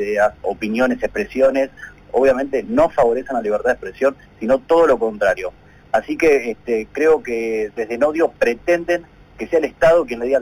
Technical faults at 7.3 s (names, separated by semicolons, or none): imaging from linear upsampling